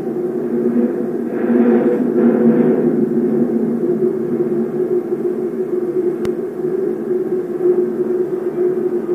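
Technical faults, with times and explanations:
6.25 to 6.28 s, loud pop: a sudden voltage pulse, likely from a switch, plug or static discharge, enters the signal path and is shaped by the circuits after it. It is heard as a single sharp pop, about 10 dB above the surrounding audio, which continues beneath it.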